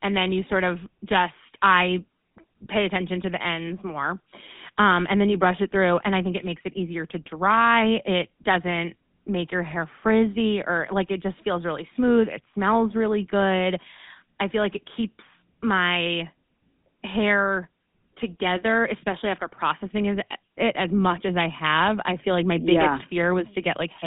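From start to finish the speech has passed through the GSM full-rate codec, which rebuilds the voice from a vocal-tract model excited by a sparse, evenly spaced pulse train, at a rate consistent with 13 kbps. The band runs only from about 150 Hz to 3.6 kHz, with nothing above 3.8 kHz, so the voice sounds narrow and telephone-like. The thinned excitation leaves a plainly audible buzzy, gravelly roughness throughout.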